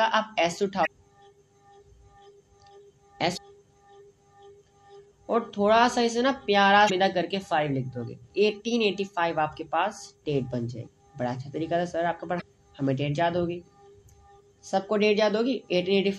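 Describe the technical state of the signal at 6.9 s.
Damaged data in the compressed stream runs from 6.86 to 6.90 s. Corrupted bytes in that stretch leave the decoder unable to read its frames correctly, so it loses sync and hunts for the next valid frame header, leaving a brief disruption in the sound of about 44 ms.

Underneath that, the whole clip carries plainly audible coding damage, likely from MP3 compression at around 64 kbps. Starved of bits, the encoder drops weaker frequency lines that flicker from frame to frame, giving a watery, swirly texture with smeared attacks.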